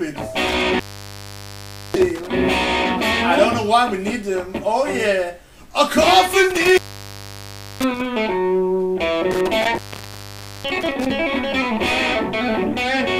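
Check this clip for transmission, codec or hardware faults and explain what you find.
An intermittent contact fault occurs three times, from 0.47 to 2.27 s, 6.50 to 8.06 s and 9.31 to 11.11 s. In each, a loose cable or plug briefly opens the signal path. The sound cuts out for about 1.15 s, 1.03 s and 0.87 s, with crackle as the contact breaks and remakes, and faint hiss in the gaps. That scratchy crackle at the edges and the uneven gap lengths separate it from a clean digital dropout or packet loss.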